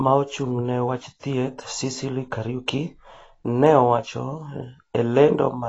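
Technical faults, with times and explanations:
Throughout, AAC compression: the speech is dull and smeared, with nothing above about 7.9 kHz and a watery, fizzy texture on sibilants and held vowels. This is likely AAC-LC at a low bitrate, and the damage fits a rate near 24 kbps. With so few bits, the encoder drops the top of the spectrum entirely and quantises the remaining frequency lines coarsely, so quiet detail between louder components is lost and shifts from frame to frame.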